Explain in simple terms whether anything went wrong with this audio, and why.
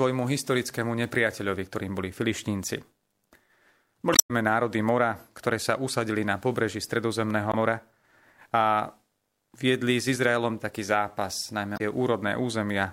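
Three short glitches in this speech come from damaged data in a compressed stream: around 4.12 to 4.31 s, 7.50 to 7.55 s and 11.74 to 11.81 s. Bits of the file got garbled, so the decoder stumbled briefly before catching the next clean chunk.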